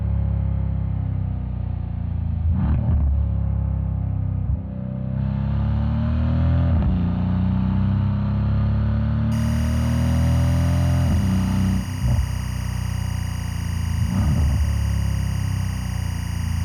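From 9.32 s to the end there's timecode bleed: linear timecode running at 24 frames per second has leaked in from a nearby track or cable. Its square wave flips between roughly 1 and 2 kHz, giving a steady chirpy warble sitting about 20 dB under the sound.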